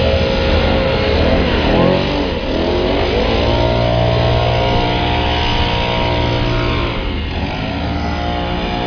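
No technical faults can be heard anywhere in the audio. There is nothing here that needs a time mark or an explanation.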